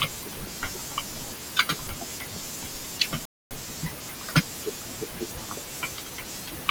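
A speech recording with a rebuffering stall from 3.25 to 3.51 s: playback halts into silence for about a quarter second, about 255 ms, because the player exhausted its downloaded audio, then resumes exactly where it stopped. Unlike a dropout, no sound is skipped; only time is added.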